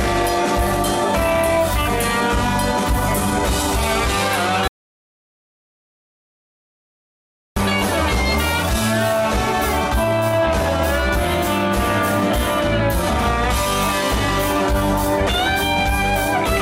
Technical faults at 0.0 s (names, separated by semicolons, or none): none